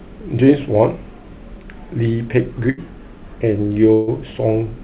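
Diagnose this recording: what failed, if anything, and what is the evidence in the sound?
Burst of packet loss at 2.70 to 2.79 s and again at 3.93 to 4.09 s, a failure at the network stage. In each gap the speech stops moving forward. The receiver's concealment stretches the last sound and fades it, for 73 ms the first time and 139 ms the second. Speech then resumes further on, with 80 ms and then 140 ms missing. The surrounding audio has nothing above 4 kHz, which fits a G.711 mu-law call path.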